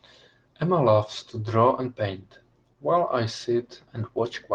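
No technical faults can be heard anywhere in the speech.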